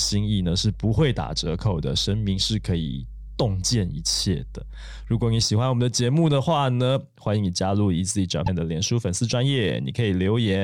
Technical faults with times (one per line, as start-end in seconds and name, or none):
0.00-5.43 mains hum
8.45-8.48 broken MP3 bit reservoir